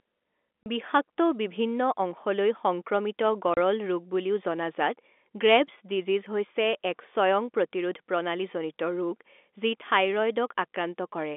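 Speech, carried over a telephone-band line that points to G.711 coding, with nothing much below 250 Hz or above 3.5 kHz. Two short dropouts cut into it. Both are packet loss filled with silence. The first runs from 0.63 to 0.66 s, just before "বিষাক্ত বিভিন্ন অংশলৈ". The second runs from 3.54 to 3.57 s. Each hole lasts 30 ms, which fits one lost 30 ms packet. The receiver played silence in its place. The sound stops and restarts abruptly, so each gap has hard edges.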